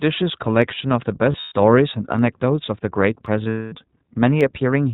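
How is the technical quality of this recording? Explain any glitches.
The technical quality is poor. The speech has passed through a narrowband VoIP codec, and there are two dropouts and three clicks.

The whole recording carries iLBC codec damage. The codec removes everything above 4 kHz and rebuilds each frame's excitation independently, which fits its 15.2 kbps mode with 20 ms frames. The voice sounds thin, slightly rough and synthetic, and the coding damage is plainly audible. On a spectrogram the energy stops sharply at 4 kHz across the entire clip, with an empty band above it.

Three sharp single clicks sit at 0.62 s, 3.26 s and 4.41 s. Each is likely caused by dropped samples, where a tiny piece of the stream, only a fraction of a millisecond, goes missing. The waveform then jumps abruptly to a later value. No sound is lost, but each jump shows as a thin vertical line running up the spectrogram and as a small step in the waveform.

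Lost iLBC frames cause two dropouts, from 1.32 to 1.52 s and from 3.44 to 3.74 s. In the first, about 160 ms is missing across 200 ms, with the longest run around 100 ms. In the second, about 260 ms is missing across 280 ms, with the longest run around 200 ms. The decoder fills each gap by repeating the last pitch cycle mixed with noise and fading it out, so the audio turns into a held, buzzy vowel. On a spectrogram this appears as flat, smeared harmonic stripes. Clear speech returns almost immediately after each gap.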